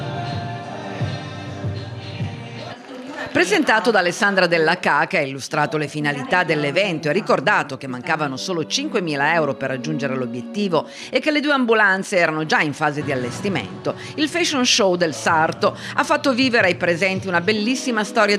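Throughout the clip there is gain pumping, most likely from input gain set far too high with a fast limiter or compressor clamping down on every loud peak. The level swings by around 5 dB as the processing reacts. Loud and soft passages sit unnaturally close together, giving the audio a squashed, breathing character.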